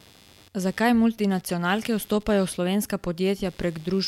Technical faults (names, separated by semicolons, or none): computer activity noise